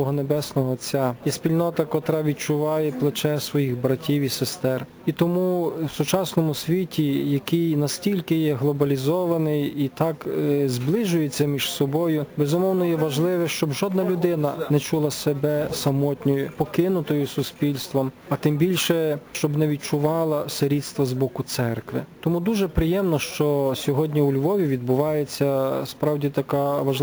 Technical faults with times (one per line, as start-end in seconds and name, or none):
0.00-27.03 imaging from sample-and-hold upsampling